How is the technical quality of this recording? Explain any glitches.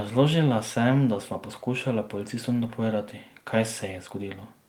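No glitches can be heard anywhere in the recording, and the signal stays technically intact throughout.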